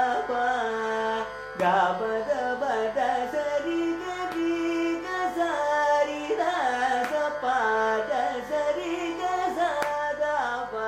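A mains buzz runs throughout: 50 Hz switching spikes add a raspy hum roughly 30 dB under the sound, showing as evenly stacked horizontal harmonic lines into the kilohertz range.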